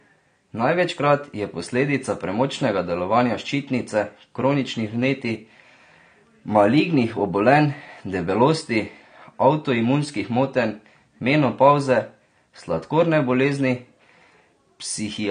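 Low-bitrate audio saved at a high bitrate runs from start to finish of this speech clip: nothing is present above 9.6 kHz, and the speech carries the artefacts of heavy compression. The likely cause is a low-bitrate encode, consistent with AAC at around 32 kbit/s, later re-encoded as a high-bitrate MP3. The second pass cannot rebuild the discarded detail, so the early cut-off and coding artefacts survive intact beneath the larger file.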